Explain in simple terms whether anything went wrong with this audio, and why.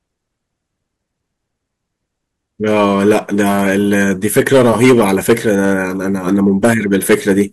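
Hard clipping runs through the whole speech clip. The signal was driven louder than the recording chain could carry, so the tops of the loudest moments were sliced flat. That adds a harsh, crackly edge whenever the speech peaks, affecting only a small fraction of the sound.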